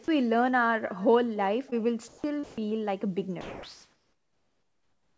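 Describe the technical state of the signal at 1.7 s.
A short concealed packet loss sits at 1.70 to 1.74 s. About 20 ms of audio never reached the decoder in time. The receiver bridged the hole by extending the preceding sound, carrying on its pitch if voiced or shaped noise if not, then crossfaded back into the real signal. The result is a brief smear or wobble lasting a few hundredths of a second.

Echo with no canceller runs through this moment as it does through the whole clip. The far end's loudspeaker output leaks into its microphone and nothing strips it out, so the speech returns after the network round trip, roughly a third of a second late. That copy sits about 25 dB below the direct speech, a faint, thinner shadow trailing each sound.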